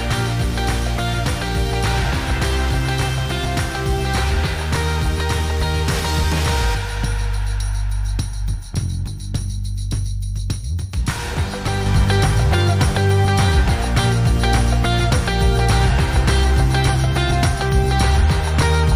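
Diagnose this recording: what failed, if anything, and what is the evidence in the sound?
A sudden gain jump at 11.86 s lifts the sound and background noise together by about 4 dB, holding to the end. The waveform envelope steps up abruptly; the spectrogram brightens across all frequencies at once. Likely cause: a digital processing gain change applied without a ramp.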